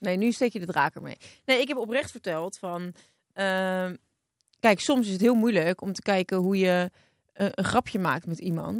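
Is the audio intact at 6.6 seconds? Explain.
No. At 6.6 s, as throughout the speech, a resampler restarted on every block puts a small error at each block edge. The 100 Hz buzz points to 10 ms blocks, likely a 24 kHz to 48 kHz conversion. Unlike mains hum, the buzz stops whenever the speech does.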